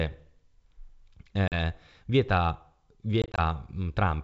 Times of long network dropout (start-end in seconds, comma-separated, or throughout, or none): none